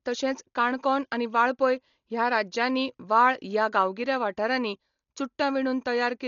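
Dolby Digital compression runs throughout the speech, with nothing above 7 kHz. The band has been narrowed and many frequency lines coded without detail, leaving heavy damage: a dull sound with rough, fluttering noise around tones. That is likely the cause, which fits a bitrate around 40 kbps.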